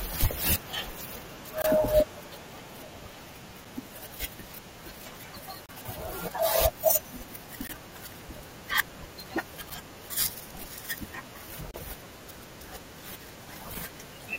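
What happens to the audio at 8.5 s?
Nothing goes wrong at 8.5 s: the speech carries on intact through that moment, with no dropout, click, distortion or other fault.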